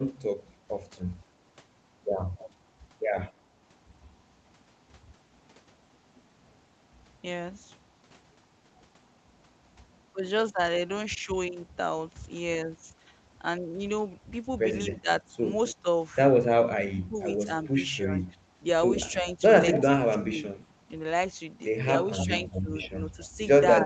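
Echo leak at 2.37 to 2.44 s: a faint scrap of the sound returns about 261 ms late, roughly 25 dB down, likely because a far-end loudspeaker's echo canceller let part of its microphone pickup slip back into the call.

Speech suppressed in double talk from 14.92 to 20.6 s: while both sides are active, the level dips in pieces totalling around 1.5 s, by up to roughly 25 dB. This is likely because the echo canceller, unable to separate talker from echo, turned both down.

Echo leak at 14.95 to 15.75 s and 19.1 to 19.83 s: delayed copies return at 265 and 266 ms. The first is about 20 dB below the direct sound. The second is nearly as loud, only about 5 dB under.

Echo leak at 22.18 to 23.27 s: another return comes back at 268 ms, about 15 dB down.

Speech suppressed in double talk from 22.23 s to the end: the same competing-talk gating likely pulls the sound down by around 20 dB.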